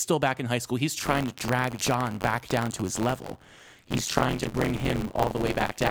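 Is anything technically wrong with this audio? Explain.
Yes. From 0.99 s to the end at 5.91 s there is buffer tearing. The write and read positions in the playback ring buffer have crossed, so most of each period replays audio about 30 ms old, with hard joins. This gives a robotic buzz near 94 Hz on the speech, which fits a 512-sample buffer.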